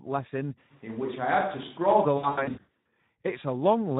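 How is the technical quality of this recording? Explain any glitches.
The recording's technical quality is poor, with three audible problems.

Speex codec damage, throughout: the low-bitrate CELP coding, consistent with about 11 kbps, leaves too few bits to rebuild the excitation. The speech comes out plainly noisy and hoarse.

Switch to a distant microphone, 0.72 to 2.04 s: the sound suddenly turns roomy and hollow, loses bass, and gains faint background noise well below the speech, though the level barely changes. The likely cause is that the close microphone dropped out and a farther one took over before cutting back.

VoIP packet loss concealed by the speech codec, 2.17 to 2.85 s: packets went missing in scattered bursts, the longest about 100 ms. For each gap the decoder extrapolated from its last pitch and filter, smearing the speech into fading buzzy tones and coloured noise, and it stays weak and distorted through the stretch.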